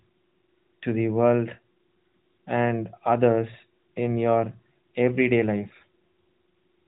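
No technical faults are present.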